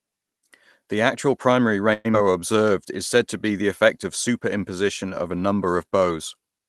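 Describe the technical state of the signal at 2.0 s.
At 2.0 s the speech sits inside a call audio freeze from 1.93 to 2.07 s, just after "actual primary". Delayed packets likely emptied the jitter buffer. About 110 ms of fading filler buzz or hiss was inserted. The speech then resumes with nothing lost.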